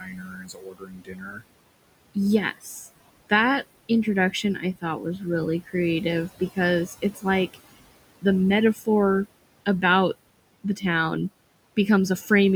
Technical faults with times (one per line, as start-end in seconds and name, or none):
0.00-12.55 noise suppressor artifacts
0.00-1.43 speech cut by the noise suppressor
8.74-8.87 speech cut by the noise suppressor
10.64-10.84 speech cut by the noise suppressor